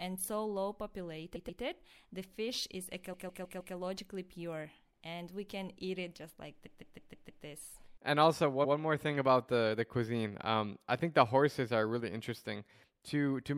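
Stutters at 1.35, 3.12, 6.65 and 8.64 s, where a 0.10 to 0.16 s chunk of speech loops one to five extra times: repeated frames, compressed data played again.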